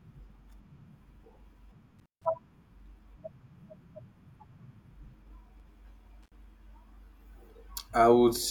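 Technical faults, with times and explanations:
1.99–2.25 s, intermittent contact. A loose connection in the cable or plug opens, and the speech drops out for about 158 ms. Crackle marks the break and the reconnection. Faint hiss remains while the line is open.
5.60 s, block of digital silence. A 2.6 ms run of samples is replaced by zeros, probably because the output buffer was not filled in time. The signal stops and restarts with no fade. That is heard as a tick or dip.
6.23–6.35 s, intermittent contact. The same kind of open connection occurs again, this time for about 61 ms. The speech cuts out with crackle at each edge. Faint hiss fills the short gap before the contact closes.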